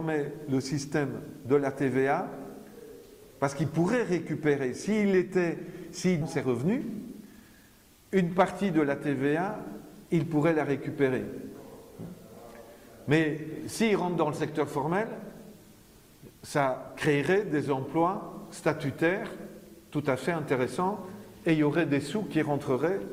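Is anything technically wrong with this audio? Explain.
Yes, two timing problems. Around 6.21 to 6.23 s there's a skip ahead: roughly a second of audio got dropped, so playback jumps straight forward with no fill. Then from 6.47 to 7.71 s comes a jitter buffer speed-up, where the receiver trims short pitch-period chunks to shed backlog, running about 8% fast at the same pitch and sounding a bit hurried.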